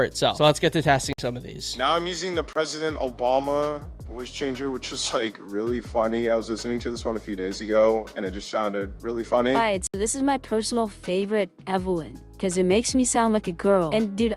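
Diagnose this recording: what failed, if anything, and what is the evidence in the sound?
Three abrupt holes: 1.13 to 1.18 s (56 ms), 2.53 to 2.55 s (23 ms), 9.87 to 9.94 s (70 ms). These are blocks of digital silence at the driver or buffer stage, where the output buffer went unfilled; the 23 ms gap fits a 1024-sample buffer.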